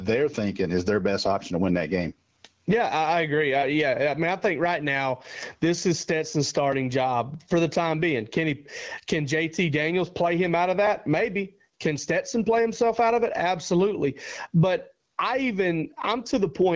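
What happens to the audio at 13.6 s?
Gain pumping runs through the whole clip, including 13.6 s. Gain set far too high for the microphone, likely held back by a fast limiter, ducks the level by around 15 dB under each loud moment, so the speech sounds squashed.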